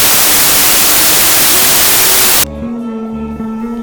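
Wrong sample width from 0.00 to 2.44 s: packed 24-bit data read as 32-bit scrambles bytes, giving loud noise over buried sound playing 1.33 times fast and high.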